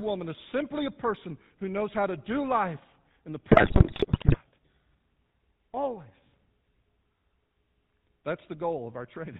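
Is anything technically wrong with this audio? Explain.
Yes. Throughout, the speech carries GSM full-rate codec damage. Pulse-driven vocal-tract modelling at 13 kbps leaves a buzzy, gravelly roughness with nothing above 4 kHz. From 3.48 to 4.37 s, just after "do life in the", GSM bit errors strike. Corrupted filter, pitch and gain values distort frames into squawks, pops and gargling.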